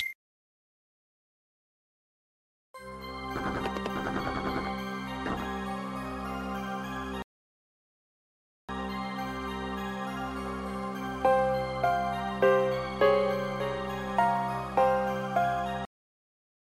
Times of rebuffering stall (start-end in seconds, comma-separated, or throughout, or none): 7.22-8.69